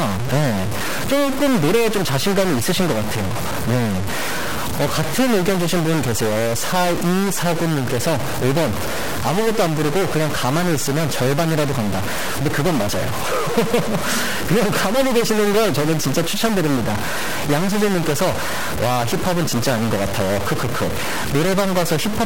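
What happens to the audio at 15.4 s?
At 15.4 s the speech carries the same harsh, buzzy distortion heard throughout, with gaps filled by noise. This is likely a stuck bit: one data bit held fixed, pushing about half the samples off by a step near -20 dBFS.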